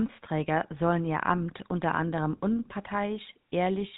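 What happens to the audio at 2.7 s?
GSM full-rate codec coding is what you hear at 2.7 s, and it isn't confined to that moment but runs through the whole clip. The codec rebuilds the speech from a model of the vocal tract fed by evenly spaced pulses, keeping only every third excitation sample, and the result fits a 13 kbps rate. Nothing above 4 kHz gets through, so the speech sounds dull and band-limited, with a plainly audible buzzy, gravelly roughness.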